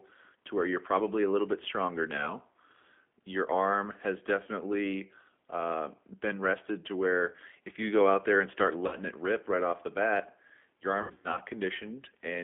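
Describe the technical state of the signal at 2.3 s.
At 2.3 s the signal is inside a stretch of VoIP packet loss concealed by the speech codec, running from about 2.17 to 2.34 s, just after "a little bit stronger". About 20 ms of audio is missing, which fits a single lost packet. The decoder extended its last pitch and filter settings with falling gain, and because each frame builds on the previous one the voice stays weak or distorted well past the gap, until about 2.34 s.

This sits on top of G.729 coding, which is audible throughout the clip, so it also applies at 2.3 s. The 8 kbit/s G.729A coder rebuilds the speech from a vocal-tract filter, a pitch predictor and a few pulses per subframe. The audio is confined to roughly 250 Hz to 3.4 kHz, and the codec damage is plainly audible as a rough, synthetic texture.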